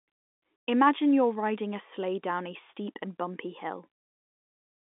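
Nothing faulty can be heard in this speech recording.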